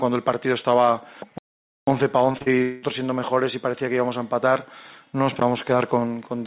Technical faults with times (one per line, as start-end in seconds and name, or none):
1.38-1.87 playback stall
2.32-2.48 short concealed packet loss
2.62-2.84 long network dropout